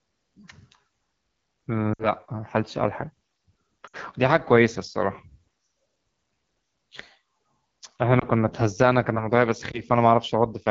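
Speech coded with the AMR wideband (HD Voice) codec at 8.85 kbit/s sounds plainly rough and raspy throughout. Unlike generic low-bitrate blur, this grain comes from the pulse-driven vocal tract model running near its floor, with a hissy noise-filled top band. Lost AMR speech frames appear at 1.94–2.07 s and 3.87–3.96 s, where the sound drops to near silence within two frames and returns weak, consistent with about 60 ms (three frames) concealed. At 8.19–8.25 s and 9.71–9.81 s there are single short dips or warbles. These are smoothed rather than clicky gaps because the decoder repeats the last pitch and vocal tract settings with falling gain.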